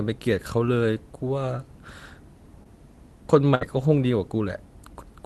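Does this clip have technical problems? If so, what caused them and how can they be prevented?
Yes. At 2.63 to 2.67 s there is a short concealed packet loss. About 20 ms of the call's audio failed to reach the decoder in time, so the receiver extended the preceding sound for roughly 15 ms and then crossfaded back into the real signal. You hear this as a brief smear or wobble in the speech, with a sliver of the sound missing. A deeper jitter buffer or in-band forward error correction would prevent it.

At 3.55 to 3.63 s there is a burst of packet loss. A run of consecutive packets, about 60 ms of audio, went missing together. The decoder again continued the last sound for roughly 61 ms and faded it down as the gap went on, producing a held buzz or fading hiss. The speech then picks up further along, and the stretch in between is simply absent. A more stable network link, or redundancy that spans several packets, would prevent it.

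The surrounding audio carries the ordinary coding character of the call path, which sounds like Opus at a modest bitrate with its top end limited to about 12 kHz.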